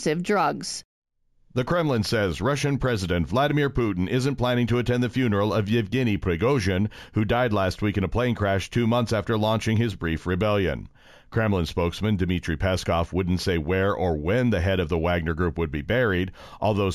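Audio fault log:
throughout: imaging from linear upsampling. The top of the speech band sounds dulled, and a metallic shimmer rides on the sibilants. Straight-line interpolation between samples filters poorly, so it rolls off the highest frequencies and leaves mirror copies of the spectrum above the original band. The first image sits between 8 kHz and 16 kHz, about 30 dB below the signal, which fits a rise from 16 kHz to 44.1 kHz.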